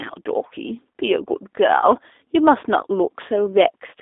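From start to end the speech carries the G.729 codec's signature. It is confined to a telephone band of roughly 300 Hz to 3.6 kHz, with nothing above. The codec resynthesises the signal from a vocal tract filter, a pitch predictor and a sparse set of pulses per 10 ms frame instead of coding the waveform itself, so the coding damage is plainly audible. The result is a rough, slightly synthetic buzz consistent with the 8 kbit/s G.729A variant.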